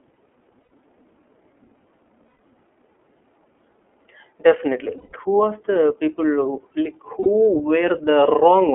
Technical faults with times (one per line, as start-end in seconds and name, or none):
0.00-8.74 iLBC codec
0.63-0.72 lost iLBC frames
2.28-2.40 lost iLBC frames
4.98-5.14 lost iLBC frames
7.20-7.28 lost iLBC frames